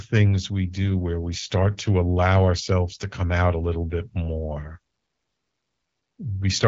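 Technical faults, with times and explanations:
No technical faults detected.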